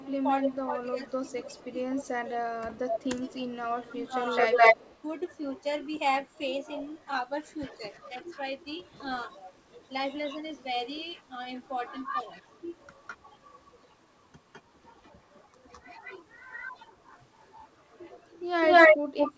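A speech recording from a call. An echo leak runs through most of it, at 0.0–2.09 s, 2.86–5.63 s, 6.36–7.05 s and 7.6 s to the end. A delayed copy trails the speech by 267 ms early on, then by 207 ms. It is likely from a far-end loudspeaker the echo canceller missed, and from 2.86 s to 5.63 s it gets louder than the speech. Speech is suppressed in double talk at 0.48–3.09 s and 3.92–4.15 s, dipping by roughly 15 dB, likely because the canceller turned down both talkers at once.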